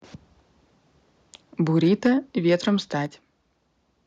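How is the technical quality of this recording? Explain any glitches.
The recording has two kinds of level trouble: brief distortion on loud peaks, and two sudden drops in level shortly afterwards.

From 1.75 to 2.09 s and again from 2.48 to 2.69 s there's harsh crackle on the loudest syllables. That's likely microphone overload, with input running about 4 dB and then about 2 dB past the converter's limit, flattening roughly 3% and then 2% of the samples.

At 2.07 s and 3.06 s everything, voice and background alike, suddenly dips by about 2 dB and then about 4 dB. That's likely the microphone volume being stepped down by software reacting to the clipping.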